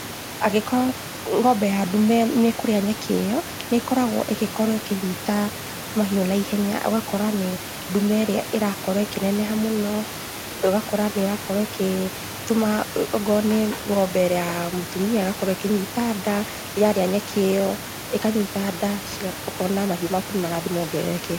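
Nothing in this speech recording points to a technical fault, so there's nothing to flag.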